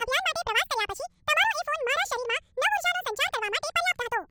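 From the first moment to the end, the speech races along at twice its natural pace and sits a full octave, 12 semitones, above where it should, giving a thin, chipmunk-like quality. This is audio read two samples at a time, a double-speed fault: the reader treated each pair of samples as a single frame, so playback skipped ahead.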